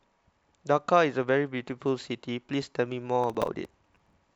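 A speech clip with processor overload crackle from 3.24 to 4.13 s. Over that stretch the processor falls behind and misses its deadlines again and again. Each miss replays a sliver of old audio with hard edges, and the pattern fits buffers of around 5 ms, with roughly twenty missed. This gives a gritty tearing over the speech that stops once the load eases. A single dropout would leave one clean gap, and clipping would follow the loud peaks instead.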